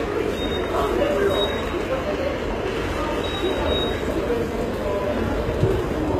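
Throughout, the audio was likely squeezed through HE-AAC compression at a very low rate, consistent with roughly 20 kbps, so the treble is rebuilt from copied lower bands. Bright detail turns gritty and metallic, nothing survives above 14.8 kHz, and the damage is plainly audible.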